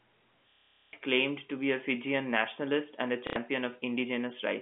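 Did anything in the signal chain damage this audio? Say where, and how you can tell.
Yes. Packet loss with the last packet repeated, at the network stage, from 0.51 to 0.93 s just before "claimed to be a" and from 3.27 to 3.36 s just after "nationalist and a". The receiver loops one stale packet, giving a robotic stutter whose buzz fits 30 ms packets.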